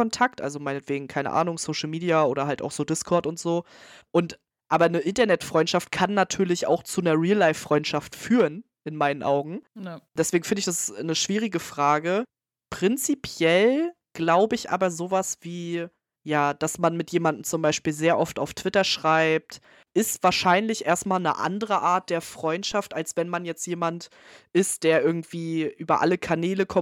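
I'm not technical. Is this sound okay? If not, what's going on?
No. At about 22.72 s, just before "als wenn man jetzt", there is a single soft low thump, like something lightly bumping the microphone, while the speech carries on unaffected. This is a DC step: the signal's resting level suddenly jumps, much like a converter resetting or an offset input being switched in. That jump is what you hear as the thump, and the offset then gently fades back out.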